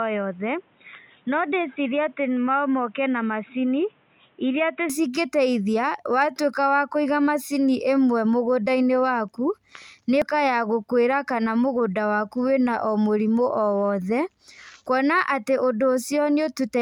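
From the start to about 4.9 s the speech sounds dull and boxy, with nothing above 3.8 kHz, a few dB quieter, and faint background noise well underneath. It then opens up with no gap. That's likely the input switched to a poorer device, with its narrower band.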